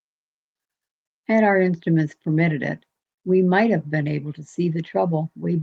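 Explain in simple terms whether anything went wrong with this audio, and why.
Nothing went wrong that I could hear: listening to this speech recording, no problem stood out at any point.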